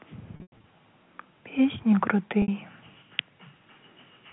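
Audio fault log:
0.36–0.64 s and 2.42–2.48 s, packet loss with pitch repetition: about 180 ms of audio goes missing in scattered gaps across the first span, the longest run 100 ms, and 60 ms in the second, which fits 20 ms packets. Each gap is filled by looping the last pitch period, giving a held, buzzy tone that fades toward silence before the sound resumes. A spectrogram shows frozen, evenly spaced harmonic lines inside the 4 kHz telephone band. A waveform shows identical repeating cycles that decay in amplitude.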